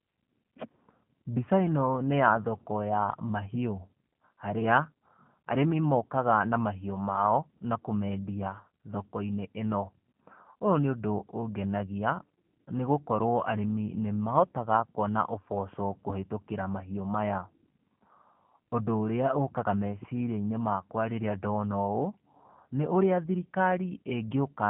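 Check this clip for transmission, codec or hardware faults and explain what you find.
One codec fault runs through the whole recording. Throughout, the speech passes through a G.729 codec, a low-rate coder consistent with 8 kbit/s that rebuilds each frame from a vocal tract model and sparse pulses rather than the waveform. The result is plainly rough and synthetic speech, narrowed to 150 Hz–3.4 kHz.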